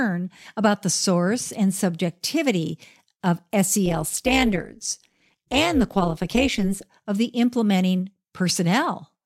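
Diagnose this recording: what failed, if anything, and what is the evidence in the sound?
Overlap-add ripple in call processing, 3.86 to 6.85 s. Speech gets a metallic buzz around 200 Hz, swinging about 11 dB. Frame overlaps don't sum evenly.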